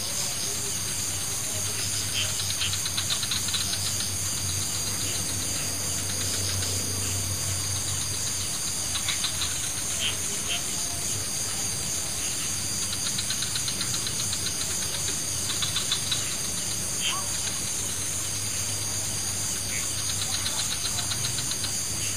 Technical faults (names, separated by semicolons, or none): none